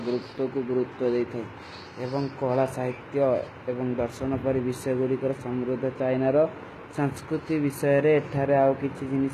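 Throughout, s sounds turn gritty and metallic over a copied-up treble ending at 14.9 kHz, likely HE-AAC compression at a bitrate near 20 kbps.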